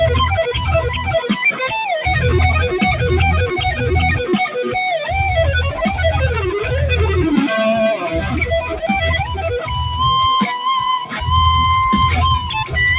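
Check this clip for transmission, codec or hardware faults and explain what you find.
Two related faults come from a speech-oriented noise suppressor acting on non-speech sound. The band-limit, with nothing above 4 kHz, fits a narrowband call path such as G.711 A-law.

Noise suppressor applied to music or sounds runs throughout. The suppressor treats sustained tones, ambience and decay as noise and keeps pulling gain down, so the level swings by around 5 dB. Onsets survive, but held portions and tails pump and thin.

Sound cut by the noise suppressor occurs at 8.02–8.87 s (about 10 dB deepest), 9.23–9.71 s (about 8 dB) and 11.05–11.21 s (about 10 dB). In each span the suppressor judged the material to be noise and attenuated it harder than the rest, so sustained or fading parts sink and decays end early.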